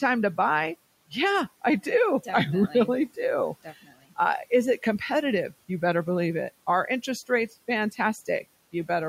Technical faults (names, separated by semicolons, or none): speech cut by the noise suppressor